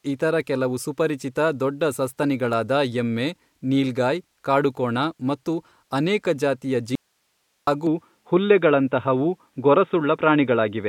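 Right after "ಕಾಡುಕೋಣ ಮತ್ತು ಅನೇಕ ಜಾತಿಯ", at 6.95 s, the speech drops out abruptly for about 0.72 s, until 7.67 s. It's an audio dropout to a faint residue: the gap isn't silent but holds only hiss, roughly 50 dB below the speech. The cut is too sudden to be a pause or a fade. The likely cause is the signal being lost for a moment while the path after the break stayed live, so its own hiss carried on through.

Then at 7.87 s the sound changes character and stays that way to the end. The input was likely switched to a poorer device. There's no gap at the switch, but from there on nothing comes through above 3.8 kHz, so the speech turns dull and boxy. The level also shifts by around 5 dB, and a different background noise sits about 50 dB under the speech. It all changes at once, which is why it reads as a device change.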